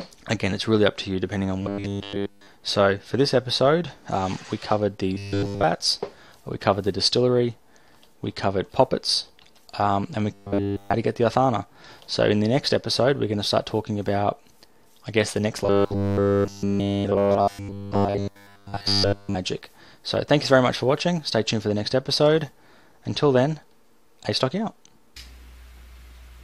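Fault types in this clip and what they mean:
Robotic sound from repeated short buffers: new audio likely arrived too seldom, so playback looped roughly 10 ms chunks in place of the missing material, stamping a rigid 100 Hz metallic buzz over nearly everything in four stretches, the longest from 15.64 to 19.36 s.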